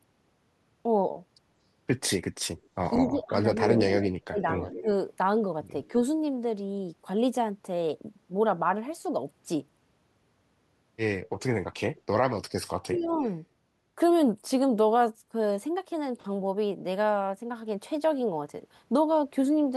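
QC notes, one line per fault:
2.57–3.79 s, 4.72–4.82 s, 5.86–5.90 s, 11.24–12.01 s and 12.99–13.33 s, echo leak: a delayed copy of the speech returns about 183 ms late in the first stretch, about 204 ms late at 4.72, 5.86 and 11.24 s, and about 228 ms late at 12.99 s. It is strongest at about 5 dB below the direct speech at first, then about 15, 35, 25 and 25 dB down. The likely cause is a loudspeaker on the far end whose echo canceller let part of its microphone pickup go back down the line.
3.08–4.87 s and 12.52–13.18 s, speech suppressed in double talk: while the far side plays on the loudspeaker over the talker, the speech dips hard, by up to about 30 dB and then about 40 dB, for roughly 700 ms and half a second in total. The likely cause is the echo canceller failing to tell local speech from loudspeaker echo and attenuating everything.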